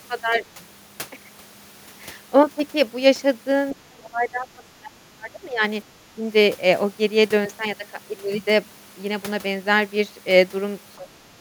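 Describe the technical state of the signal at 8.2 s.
At 8.2 s the speech signal is intact, with no audible fault at that point.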